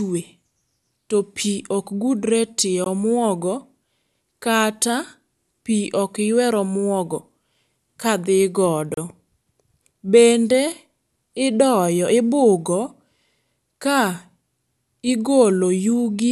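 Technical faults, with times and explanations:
2.84 s and 8.94 to 8.97 s, gap at a join of encoded pieces: separately encoded segments were spliced untrimmed, so encoder start delay and last-frame padding remain, opening silences of about 18 ms and 32 ms in the speech, with smeared edges before it resumes.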